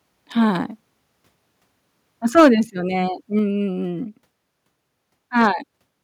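From 2.37 to 2.48 s the speech turns harsh and crackly, with peaks about 6 dB over and a sizeable share of samples flattened, most likely microphone overload, with input gain set too high. At 2.4 s the level drops suddenly by about 2 dB, likely the microphone volume being stepped down in response to that distortion. A milder crackle returns from 5.41 to 5.47 s, about 1 dB over with only a small fraction of samples cut, again likely from overload.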